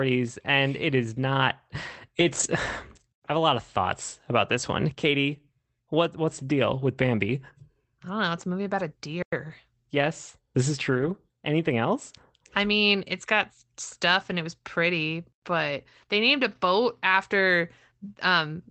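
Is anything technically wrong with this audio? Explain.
Yes, two kinds of fault are audible in this speech clip, which has come through an Opus call path whose content stops at about 8 kHz, consistent with a setting around 24 kbps.

Lost packet rebuilt from error correction occurs at 2.19–2.45 s, 10.93–11.15 s and 16.51–16.57 s. Packets went missing, and the decoder substituted the low-bitrate backup copies carried in the following packets, so nothing drops out. The patched stretches sound rougher and grainier. The longest covers about 140 ms, pointing to roughly seven lost packets. On a spectrogram these spans show smeared, noisier harmonics, with no silent hole in the waveform.

Gap between chunks appears at 3.12–3.22 s, 9.22–9.32 s and 15.32–15.42 s, each 100 ms long and spaced about 6.1 s apart. The audio was delivered in 6-second chunks, and silence was left at each join, so the speech is cut abruptly and resumes with nothing missing. 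These sound like brief hard-edged dropouts. The waveform goes flat at each one, and the spectrogram shows a clean vertical blank band with sharp edges.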